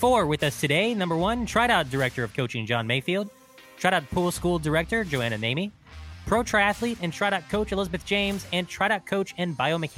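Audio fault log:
8.88 s, bit error spike: a single sharp tick, bright and spread across the whole spectrum, with no relation to the surrounding sound. One sample jumped to about -30 dBFS and snapped straight back, the sign of one flipped bit in memory or on a digital link.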